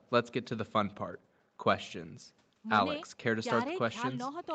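Nothing stood out on listening to this speech recording, which carries the narrowed top end of a call path with no content above about 8 kHz.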